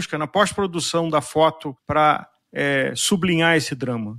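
No technical faults can be heard anywhere in the recording. There is nothing to place in time or describe as having gone wrong.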